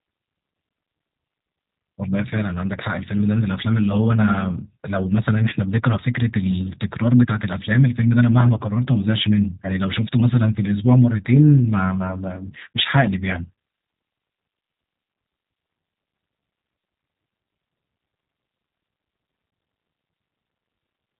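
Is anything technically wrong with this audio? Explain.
Yes. Throughout, the speech has passed through a G.729 codec, consistent with an 8 kbit/s voice stream. Each short frame is rebuilt from a vocal-tract filter, pitch prediction and a few pulses, and nothing survives above 3.8 kHz, and the voice sounds plainly rough and synthetic.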